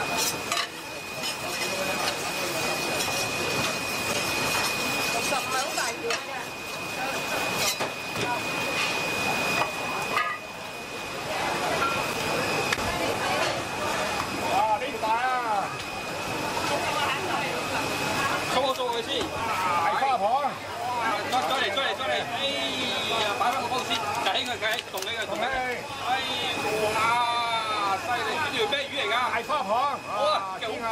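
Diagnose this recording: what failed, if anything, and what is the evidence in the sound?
The failure is at the codec stage: compressed frames skipped. At 14.93–14.96 s, 19.39 s, 21.11 s and 29.51 s the audio jumps ahead by roughly 70, 40, 70 and 20 ms. That fits whole 20 ms frames being dropped.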